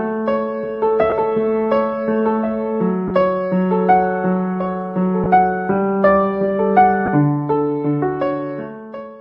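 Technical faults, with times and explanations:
1.10–1.12 s, 3.08–3.11 s, 5.24–5.26 s and 7.06–7.08 s: lost LE Audio frames. Each gap is brief, about 20 ms, with the 3.08 s gap nearer 30 ms. That fits two or three 10 ms frames going missing over the Bluetooth link. The LC3 decoder fills each hole by repeating the last spectrum with scrambled signs. Tonal content turns briefly into a noisy smear. The gaps are too short to fade toward silence.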